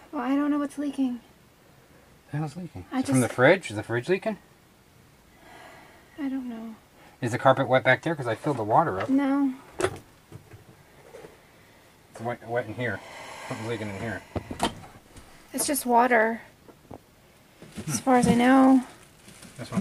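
No technical faults can be heard anywhere in the recording; the signal holds steady and intact throughout.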